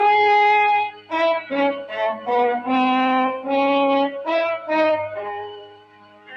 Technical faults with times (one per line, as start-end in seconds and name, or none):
0.00-6.37 noise suppressor applied to music or sounds
0.84-1.13 sound cut by the noise suppressor
5.14-6.37 sound cut by the noise suppressor